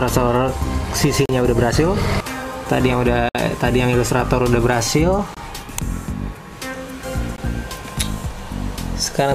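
Hard-edged silent holes at 1.26–1.29, 3.29–3.35, 5.35–5.37 and 7.36 s are gaps between stream segments; their regular 2-second spacing matches segment boundaries, and unlike dropouts, the sound resumes intact.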